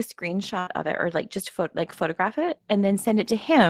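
From 0.19 s to 1.26 s the level climbs by about 3 dB: automatic gain rising. The gain control judged the input too quiet and raised its gain gradually, so the speech and the background noise swell together over roughly a second rather than jumping.

Inside that rise, at 0.59 s to 0.69 s, a burst of packet loss interrupts the speech. The receiver concealed the gap by extending the last sound for about 73 ms while fading it down, which comes across as a brief held buzz or dying hiss. When the audio returns, roughly 80 ms of speech has been skipped, so the continuation lands slightly further along than it should.

From 1.97 s to the end of the clip, automatic gain rising happens again. The control once more treats the signal as too quiet and steps its gain up slowly, and voice and background grow louder together through the remaining seconds.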